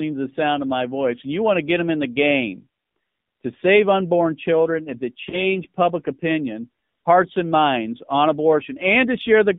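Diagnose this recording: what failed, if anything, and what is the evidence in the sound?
The codec stage is at fault throughout: this is the AMR narrowband mobile codec, and the coding damage is plainly audible. The speech sounds buzzy and synthetic, which fits a low AMR-NB mode near 7.4 kbps. A spectrogram shows a hard band from 150 Hz to 3.7 kHz, with nothing above.

The second fault is lost AMR speech frames on the radio link. From 5.30 to 5.56 s the sound briefly dips or warbles as the decoder repeats the last good pitch and vocal tract settings at falling gain. That fits a single lost 20 ms frame. The waveform shows a short envelope sag there, and the spectrogram shows smeared, flattened harmonics.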